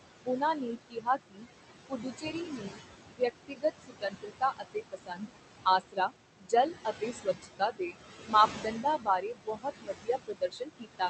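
Noise suppressor artifacts run through the whole speech clip: the suppressor pulls the steady background down by about 19 dB in each frequency band it judges to be noise, so the room noise, which sits only about 7 dB below the voice, dips between phrases and swells back under them. Speech cut by the noise suppressor occurs from 0.26 to 1.46 s, 1.89 to 2.78 s, 3.1 to 5.3 s, 5.65 to 6.53 s and 6.85 s to the end. In these stretches the suppressor mistakes quiet parts of the speech for noise and turns them down with the background by about 19 to 22 dB. Across the first four spans this swallows roughly half a second, most of a second, a full second and close to half a second of quiet speech. Everything is heard through a call codec whose top end stops near 8 kHz.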